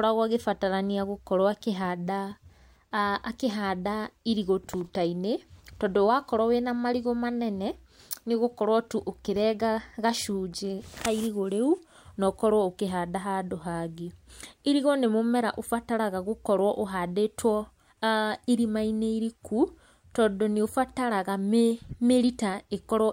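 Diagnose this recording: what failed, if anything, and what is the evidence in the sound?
Nothing failed: no stage in the chain, from wiring to playback, leaves an audible defect anywhere in the speech.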